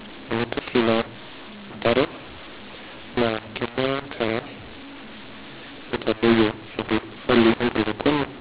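From start to finish the speech has the signature of mu-law and A-law mixed up. The audio was written as mu-law G.711 telephone coding but read back with the A-law table, so every sample lands at the wrong level: some too loud, some too quiet, and near-silent samples pushed well up. You hear it as harsh, gritty distortion over the speech, and the pauses fill with noise where there should be quiet. The 4 kHz telephone band comes through as expected.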